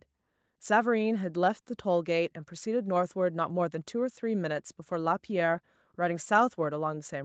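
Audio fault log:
No faults found.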